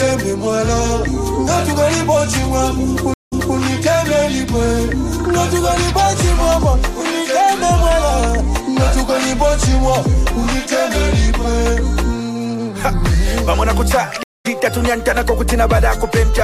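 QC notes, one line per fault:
3.14–3.57 s and 14.23–14.47 s, stream reconnect: the sound drops out for about 0.18 s, then 0.22 s, and resumes at a different point: first repeating the preceding 255 ms, then skipping roughly 150 ms ahead. A broken connection restarted the decoder mid-stream.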